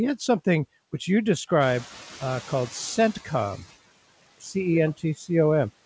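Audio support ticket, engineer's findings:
Noise suppressor artifacts throughout: background pumped down about 16 dB between phrases, rising under speech. Per-band frame-wise gain from the suppressor. Band ends at 8 kHz, consistent with a wideband call codec such as G.722.

Noise suppressor catching up, 1.6–3.61 s, right after "had something which you": room noise jumps about 11 dB near 1.5 s and passes through under-reduced. The suppressor's noise estimate lags, settling over about 2 s.

Speech cut by the noise suppressor, 4.23–4.55 s and 4.97–5.29 s: soft speech segments swallowed, dips of about 20 dB and about 16 dB, roughly a tenth and a fifth of a second affected. Suppressor misclassifying low-level speech as noise.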